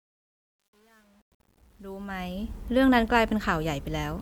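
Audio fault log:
0.00–2.53 s, truncation distortion on a fade: the fade-in is gritty through 2.13 s, consistent with undithered 9-bit level steps, before clearing as the fade completes at 2.53 s.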